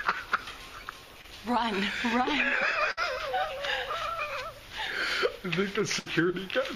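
At 1.21 s there is a short concealed packet loss. About 20 ms of audio never arrived. The receiver extended the preceding sound for 24 ms, briefly smearing it.

Bursts of packet loss follow at 2.91 s and 5.99 s. Each drops 60 ms. Filled gaps of 57 and 64 ms fade the last sound, then audio resumes further on.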